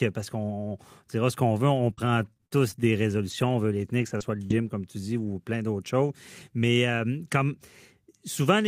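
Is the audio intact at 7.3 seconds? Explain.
Yes, at 7.3 seconds the speech runs through cleanly, with no dropout, click, distortion or other audible fault at that point.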